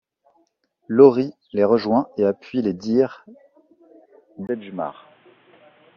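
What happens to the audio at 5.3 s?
At 5.3 s the speech is in a stretch where the input has likely switched to a poorer device, running from 4.47 s to the end. The replacement device passes nothing above 3.8 kHz, so the voice turns dull and boxy. It drops roughly 10 dB in level and carries a new noise floor around 30 dB below the signal. A brief 20 ms silence at 4.47 s marks the changeover.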